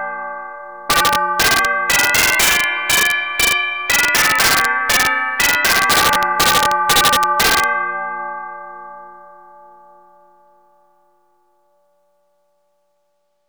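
From 0.9 to 3.52 s, and again from 3.9 to 7.64 s, the loud peaks break into violent cracks, far harsher than ordinary clipping. This is integer overflow: with the signal driven about 6 dB past full scale, any sample exceeding the largest representable integer wraps around to the opposite extreme instead of being held at the limit. Each overshooting peak therefore jumps across the whole range, producing these sharp, snapping discontinuities.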